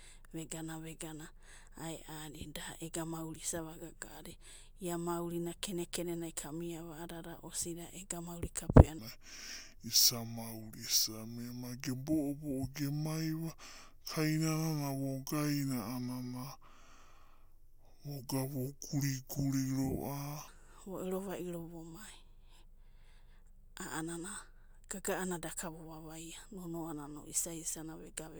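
From 8.99 s to 20.48 s a section at the wrong speed drops the speech abruptly to 0.696 times its proper rate, about seven semitones lower, so it turns deep and drawn out before snapping back. The likely cause is playback against a mismatched clock.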